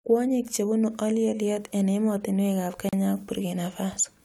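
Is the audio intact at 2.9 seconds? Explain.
No. From 2.89 to 2.93 s the speech drops into a 38 ms silence, a gap at a join of encoded pieces. Separately encoded 4 s segments were spliced untrimmed, so encoder delay and final-frame padding leave a hole with smeared edges before the speech resumes where it stopped.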